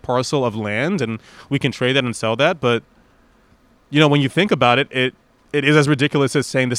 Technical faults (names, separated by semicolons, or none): none